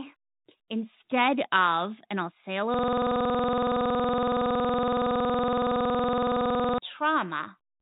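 Speech, carried over G.711 telephone coding, which limits it to the 4 kHz telephone band. From 2.74 s to 6.78 s a system hang loop replaces it: one 46.44 ms fragment repeats exactly at 21.5 Hz, a buzzing stutter that fits a 2048-sample ring buffer replayed while the driver was frozen.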